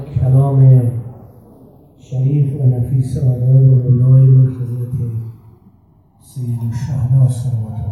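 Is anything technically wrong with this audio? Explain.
Yes. Throughout, a slow flanging sweep develops: channels drifting apart, their separate clocks off by a couple of hundred parts per million, sliding comb notches as the offset nears 1.5 ms.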